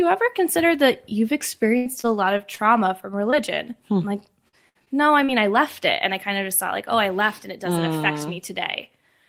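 Choppy speech runs from 1.77 to 2.60 s, where pieces drop out and fill continued from the preceding sound takes their place. This is repeated packet loss: four gaps in quick succession, the longest 81 ms, cost about 160 ms of audio, and the receiver covered each by extending the preceding sound, so concealment fills about a fifth of that stretch. Brief smears or wobbles follow at 3.30–3.34 s, 4.85–4.88 s and 5.24–5.30 s. These are short concealed packet losses of 20 to 40 ms, each hole patched from the last sound's pitch or noise and then blended back into the real signal. Two held, fading fragments at 4.48–4.55 s and 4.69–4.77 s come from bursts of packet loss, with 40 and 60 ms missing. The last sound is sustained and turned down across each gap, and the audio resumes further on with that portion gone.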